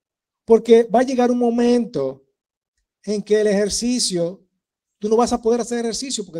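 From 2.09 to 2.73 s there are repeated stalls (stutter). Packets arrived late, the jitter buffer emptied five times, and the receiver stretched the last sound over 78 ms in all, longest 40 ms. Nothing is lost, but the speech drags and catches before "en que el ejercicio".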